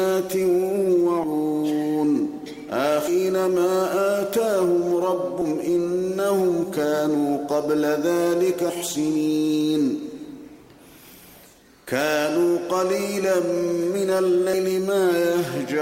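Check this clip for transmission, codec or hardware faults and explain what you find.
The clip has one kind of fault, compressed frames skipped, occurring five times: 1.23–1.26 s, 3.07–3.10 s, 5.41 s, 8.69–8.72 s and 14.53 s. At each point whole 20 ms frames of the compressed stream never reach the output, so the audio leaps forward, roughly 200 ms at most jumps, nearer 300 ms at 3.07 s and about 150 ms at 14.53 s. Unlike a dropout, nothing falls silent, only material abruptly missing.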